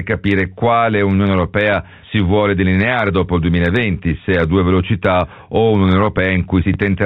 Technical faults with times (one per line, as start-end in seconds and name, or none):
6.74 packet loss with last packet repeated